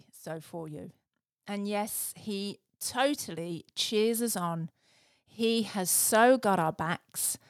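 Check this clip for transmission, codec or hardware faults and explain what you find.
One fault stands out: automatic gain rising, running from 0.24 s to 4.81 s. The gain control judged the incoming level too low and kept turning it up, lifting everything by about 7 dB over more than four seconds. The speech and the background noise swell together rather than the talker getting closer. On a waveform the envelope widens steadily across that span. On a spectrogram the noise floor brightens along with the speech energy.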